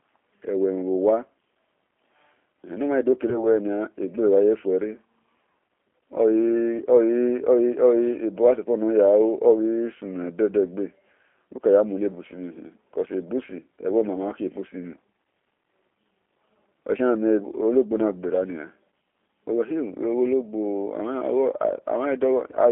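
G.729 codec damage, present for the whole clip: the speech has been squeezed through a low-rate model that keeps only a vocal tract filter, a pitch predictor and a few pulses per frame, consistent with an 8 kbit/s G.729A stream. The line band runs from about 250 Hz to 3.4 kHz, so the sound is thin and boxy with no air on top, and the voice carries a plainly audible rough, slightly synthetic texture.

VoIP packet loss concealed by the speech codec, from 3.30 to 3.45 s: about 10 ms of the stream never arrived, and the decoder filled the gap by extending its last pitch and filter settings while lowering the gain. Because each frame is built from the one before, the error persists beyond the gap itself, so the voice sounds smeared into a buzzy tone or coloured noise, then weakened, for roughly 150 ms before it recovers.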